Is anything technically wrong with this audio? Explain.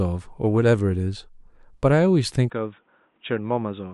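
Yes. From 2.5 s to the end, the speech abruptly turns duller and boxier, with nothing above 3.8 kHz, a drop of roughly 5 dB in level, and a new low background hiss sitting far below the speech. There is no gap at the transition. The likely cause is an input switched to a poorer device: the system changed capture device mid-recording to one with a narrower passband, its own coloration and gain, and a different noise floor.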